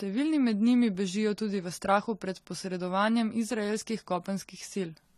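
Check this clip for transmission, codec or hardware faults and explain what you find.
One codec fault runs through the whole speech clip: AAC compression. Nothing reaches above 13.7 kHz, and the damage is plainly audible. The cause is likely low-bitrate AAC-LC, which fits a rate around 32 kbps. Short of bits, the encoder lowers its cut-off and quantises frequency lines coarsely, leaving spectral gaps that shift frame to frame. That gives a dull, smeared tone with warbly, fizzy sibilants. A plain low-pass filter would sound dull but steady, without that shifting texture.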